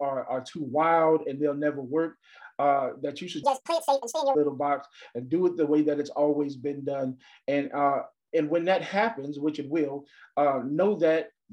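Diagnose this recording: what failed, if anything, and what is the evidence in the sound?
A section at the wrong speed runs from 3.43 to 4.35 s: the audio plays 1.81 times too fast and jumps up by roughly ten semitones, then drops back. Because timing and pitch move together, this is a resampling slip, likely a wrong clock at playback, not a pitch-shift effect.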